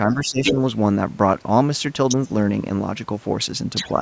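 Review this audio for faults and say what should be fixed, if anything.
Speech suppressed in double talk, 0.07 to 0.58 s: the speech dips by up to about 15 dB, likely because the echo canceller mistook overlapping talk for echo and attenuated both. Prevent it with better double-talk detection that holds the near-end path open when both sides speak.

Other side's voice leaking through, at 0.1 to 0.15 s (about 30 dB down), 0.45 to 0.54 s (about level with the speech), 2.08 to 2.16 s and 3.75 to 3.9 s (both about 5 dB down): a second voice, likely loudspeaker echo the canceller failed to remove. Prevent it by letting the echo canceller converge fully and adding residual echo suppression.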